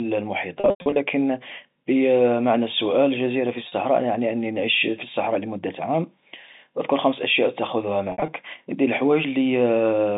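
Packet loss with pitch repetition hits three times, at 0.60 to 0.96 s, then between "السؤال الجزيرة في" and "يعني أني نعيش في" at 3.68 to 3.72 s, and after "أذكر خمس أشياء تأخذها" at 8.12 to 8.28 s. Each time the receiver loops the last pitch period, giving a brief buzzy hold over the narrow telephone band. The 100 ms run near the start fades toward silence.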